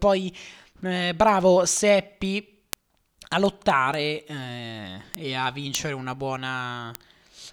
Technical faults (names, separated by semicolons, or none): word clock ticks